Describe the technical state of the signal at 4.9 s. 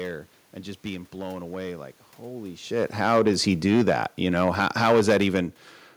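At 4.9 s two things are going on at once. First, hard clipping, which runs through the whole clip: the speech is driven about 10 dB past what the chain can carry, so the loudest peaks get sliced flat. Only a small fraction of samples actually hit the ceiling, but those flat tops throw harmonics high up the spectrum, and you hear it as a gritty crackle riding on the stronger syllables.

Second, you're in the middle of an automatic gain falling stretch that runs from 2.86 s to 5.83 s. The gain control found the input too loud, or its background noise too strong, and has been easing its gain down, about 6 dB in total over that span. So at 4.9 s the level is lower than at the start of the ramp and still sinking. The room noise drops right along with the speech, which tells you it's the gain moving and not the talker backing off.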